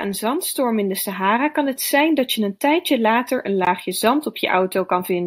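At 3.65 s the speech drops out for a moment, a gap of about 19 ms whose edges are smeared, and then carries on exactly where it left off. This is a gap at a join of encoded pieces: the audio was encoded in separate sections and joined untrimmed, so the encoder's start-up delay and the padding in the last frame of the earlier piece were both kept.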